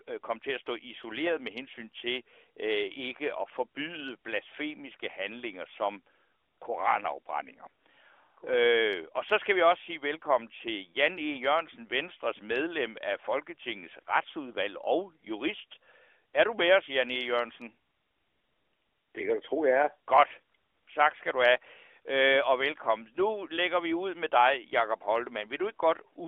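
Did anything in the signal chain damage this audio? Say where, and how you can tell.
No, nothing in the chain damaged this audio.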